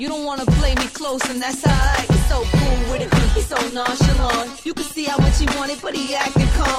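At 2.55 s a call bitrate drop begins and lasts to the end. The call's bandwidth estimate fell, so the encoder cut from 128 kbps to 23 kbps. It stays lowest for 2.81 s. The sound turns coarse and loses its top end.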